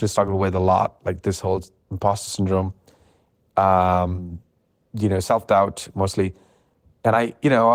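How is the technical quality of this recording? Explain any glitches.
The signal holds together without any technical glitches, dropouts or disturbances to report.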